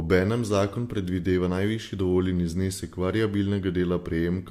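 No technical faults can be heard in this recording.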